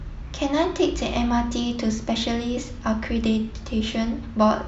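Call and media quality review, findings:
No audible faults found in the speech recording; nothing to raise against any component.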